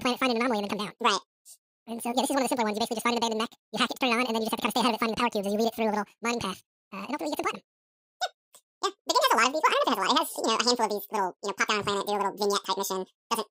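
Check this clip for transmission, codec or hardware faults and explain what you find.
The whole clip has one fault: the audio was read two samples at a time (double speed). Throughout, the speech runs at twice its proper rate and sits an octave, 12 semitones, too high. The reader treated each pair of samples as a single frame, as if the data held two channels or samples twice as wide, so twice the expected samples went by per unit time. A plain sample-rate mismatch would shift speed and pitch cleanly; reading sample pairs also folds back any strong content above a quarter of the sample rate.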